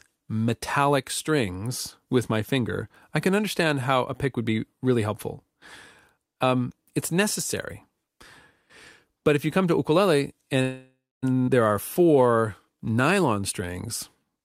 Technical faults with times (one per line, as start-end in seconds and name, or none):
10.61-11.24 call audio freeze
11.46-11.50 skip ahead
11.74-14.31 jitter buffer slow-down
14.36-14.45 jitter buffer speed-up